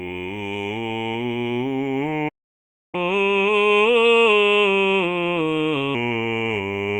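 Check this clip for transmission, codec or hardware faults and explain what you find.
Two related playback faults affect this music clip: a stall followed by a catch-up period.

The playback stall runs from 2.28 s to 2.95 s. The music cuts to silence mid-flow for about 0.65 s, then resumes. The likely cause is the player's buffer running dry or its output thread being blocked, leaving nothing to send to the output until data arrived again.

The catch-up at higher speed runs from 2.95 s to 5.95 s. To recover the lost time, the player resamples its backlog at 1.15 times normal speed, so tempo rises and pitch goes up by about two semitones, then both drop back to normal.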